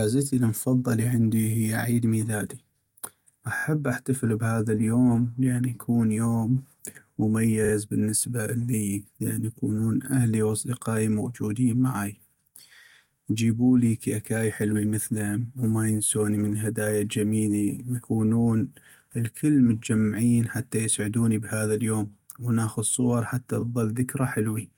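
At about 3.57 to 3.63 s, just before "احتفل بهذا اليوم لأن", there's a quick stutter from repeated frames: a chunk of roughly 21 ms, which fits a single compressed frame, plays three extra times. Around 7.64 to 7.72 s, before "بالنسبة لي لأن يكونون", a longer 43 ms block repeats twice more. Right after "ونأخذ صور حتى", at 23.60 to 23.62 s, one 21 ms block plays once more. Each repeat stretches the speech by its own length, about 170 ms in total.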